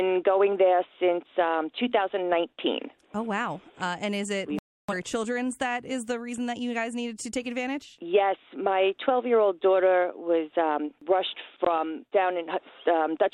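At 4.59 s the audio mutes abruptly and stays silent until 4.94 s, a digital broadcast dropout. The receiver stopped getting frames that passed their checks, consistent with several lost frames, and muted until clean data resumed. The programme returns further along, with that portion gone.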